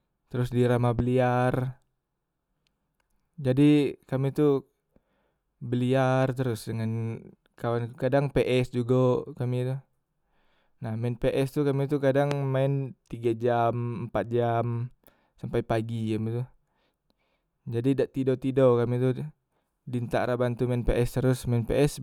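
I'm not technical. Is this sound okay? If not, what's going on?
No, there are two loud pops in this speech recording, at 0.99 to 1.02 s and 12.31 to 12.34 s, the second a bit stronger. Each is a short, sharp click lasting a few hundredths of a second, most likely from a sudden electrical jolt, like a plug, switch or static, while the speech carries on underneath.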